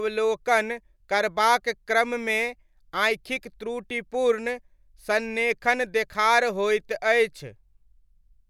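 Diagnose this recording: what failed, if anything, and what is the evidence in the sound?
Nothing in this recording has failed. No stage, from capture through playback, leaves an audible defect anywhere in the speech.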